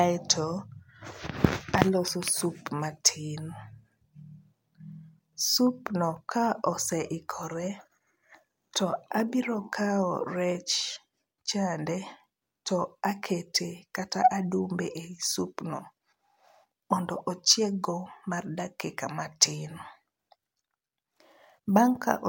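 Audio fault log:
Nothing stood out on listening to this speech recording.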